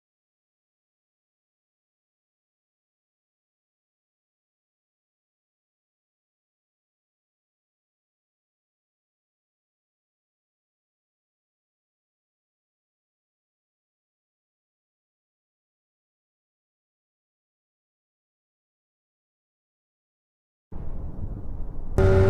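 Lost LE Audio frames from 21.02 to 21.40 s: about 220 ms of dropouts, consistent with 10 ms frames, are scattered across 380 ms, the longest run around 50 ms. The LC3 decoder repeats the last spectrum with randomised signs, so the sound turns into a brief, fading, noisy smear.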